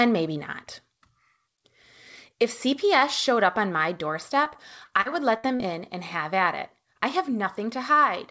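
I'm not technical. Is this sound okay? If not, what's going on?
No. Right after "showed up on my", from 4.44 to 5.61 s, repeated packet loss (robotic sound) leaves seven tiny gaps, patched by stretching earlier sound, so it turns choppy until "in and have at".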